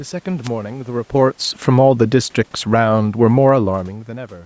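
A wireless microphone noise hit from 0.43 to 0.49 s: the FM radio link fades briefly as reflections cancel, so receiver noise rises into a short swish of static over the speech.

Automatic gain falling from 2.58 to 3.82 s: the gain control judges the input too loud or its background noise too strong and eases it down by about 4 dB, so the speech and room noise sink together.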